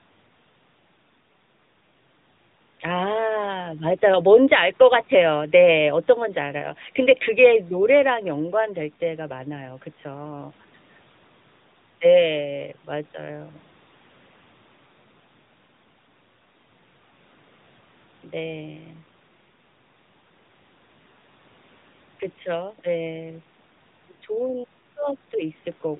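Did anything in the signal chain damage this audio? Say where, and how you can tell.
Yes. Throughout the speech, everything above 4 kHz is gone and the voice sounds buzzy and synthetic. That points to the codec stage, the AMR narrowband mobile codec. It rebuilds speech from a vocal-tract model excited by sparse pulses in 20 ms frames, and its plainly audible roughness fits a mid-rate mode around 10 kbps.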